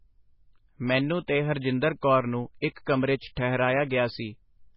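A speech recording with heavy MP3 compression throughout: nothing is left above 5.5 kHz, and the remaining band has the watery, swirling texture of spectral lines dropping in and out between frames, which fits a very low bitrate around 16 kbps. The likely cause is an MP3 encoder working well short of bits. Pre-echo appears at 2.01 s before "ਕੌਰ ਨੂੰ", at 2.85 s before "ਕਮਰੇ 'ਚ", and at 3.35 s just after "ਕਮਰੇ 'ਚ". In each case a short hiss of 15 to 18 ms runs ahead of a sharp onset, because the block's quantisation noise spills into the quiet moment before the attack.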